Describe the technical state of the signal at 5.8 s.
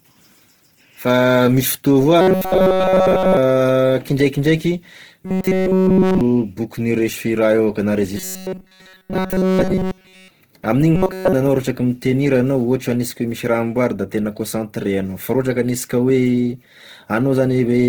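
At 5.8 s the speech is caught in a stretch of robotic sound from repeated short buffers, running from about 5.25 to 6.21 s. The buzz sits at 188 Hz, which fits the player likely looping a chunk of roughly 5.3 ms while the real audio gets skipped. Across the whole stretch it's essentially all repeats, so the speech turns into a rigid, metallic drone that only loosely tracks what's being said.

Underneath that, the clip carries plainly audible Opus compression, likely from a low-bitrate encode in the codec's CELT music mode. The bandwidth is still fullband, reaching up to about 20 kHz, but the coarse band filling leaves the speech sounding grainy, rough and noisy.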